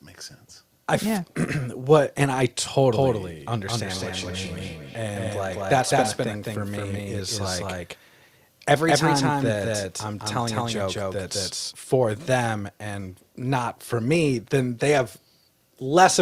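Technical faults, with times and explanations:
2.93–11.73 s, doubled audio track: a second full-band copy of the speech runs about a fifth of a second behind, at roughly the same level, and begins and ends abruptly. It is likely a second capture or an edit holding two copies out of step. Unlike an echo loop, it repeats only once, never thins or rings, and carries no room colour.
3.86–6.33 s, feedback echo between two devices: each word returns roughly every 0.3 seconds, at most about 15 dB below the speech, growing thinner and more ringing with each pass. One device plays what the other's microphone sent, and that microphone captures it again. The repeated, degrading returns set it apart from the single clean copy.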